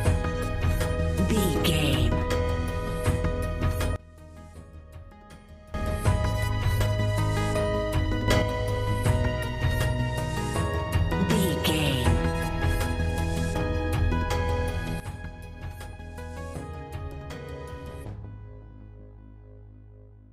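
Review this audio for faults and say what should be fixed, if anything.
The level drops abruptly by about 20 dB from 3.96 to 5.74 s, leaps up by about 6 dB from 8.28 to 8.42 s, and falls by about 11 dB from 15.0 s to the end. Each time, the background noise shifts in step with the sound. These are sudden gain jumps, likely from a gain value being switched from one sample to the next with no ramp. Any gain change should be applied through a short fade lasting a few milliseconds.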